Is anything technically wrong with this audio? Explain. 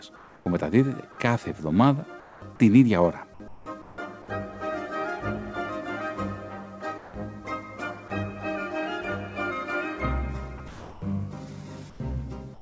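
Yes. Discontinuous transmission is the likely cause of two related faults.

Comfort noise in place of the background appears six times: 0.16–0.46 s, 2.20–2.42 s, 3.48–3.98 s, 6.98–7.14 s, 11.90–12.00 s and 12.54–12.61 s. The sender's voice detector judged these pauses silent and stopped sending, so the receiver filled them with synthetic noise. The real background, sitting about 20 to 27 dB below the loud parts, gives way to a flat, detail-free hiss. It drops about 3 dB in most gaps and about 6 and 8 dB in the last two.

Sound chopped by the voice detector occurs from 10.58 to 11.02 s. Here the detector toggled transmission on and off within the stretch, and about 360 ms of real sound was replaced by synthetic fill. Quiet portions vanish and the sound becomes choppy. All of this passes through the G.722 call path, which leaves nothing above 8 kHz.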